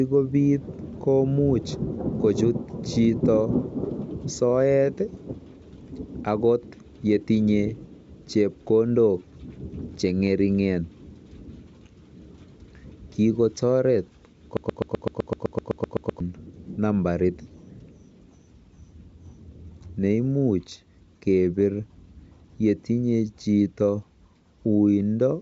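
A broken-record loop runs from 14.57 to 16.20 s, where a 127 ms speech fragment repeats exactly 13 times back to back, producing a rapid stutter. Likely a stalled player or stream kept resending its last fragment, so the speech due there is lost.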